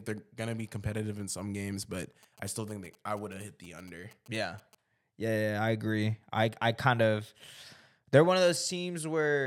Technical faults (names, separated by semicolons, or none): GSM signalling bursts